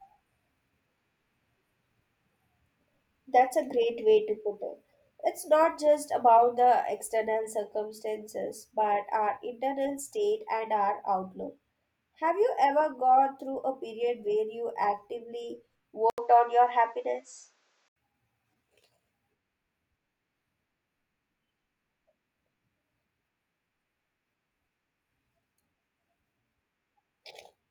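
At 16.1 s, just after "period where you actively", an 80 ms gap opens. Then the speech turns dull, with nothing above 8.1 kHz. The level shifts by around 5 dB, and faint new noise appears. The input likely switched to a poorer device. Fuller sound returns at 17.96 s.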